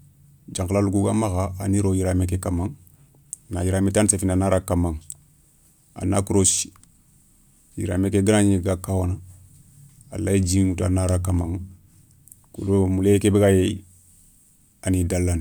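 A speech recording with no technical faults to point to. Nothing in it calls for a time, a value or a cause.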